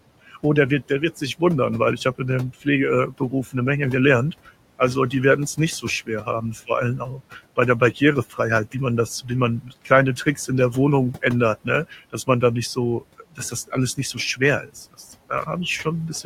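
Noise suppressor artifacts run through the whole clip. The room noise sits about 20 dB below the speech, and the suppressor pulls it down by about 18 dB in the gaps, then lets it back up under the speech. Because the attenuation is decided band by band and frame by frame, the leftover noise does not stay steady.

Speech cut by the noise suppressor happens in four stretches, where the suppressor mistakes parts of the speech for noise and turns them down with the background. From 0.31 to 1.41 s, just before "wundern weil ich habe", short fragments totalling around a tenth of a second drop by up to about 10 dB. From 2.18 to 3.55 s, right after "wundern weil ich habe", the cuts are deeper, up to about 17 dB, and add up to roughly a fifth of a second. From 4.46 to 10.49 s, leading into "in der", parts of the speech are swallowed for a total of about 0.7 s, with drops up to about 13 dB. From 11.22 s to the end, around half a second of material is dipped by up to about 15 dB, so it sounds swallowed or faint.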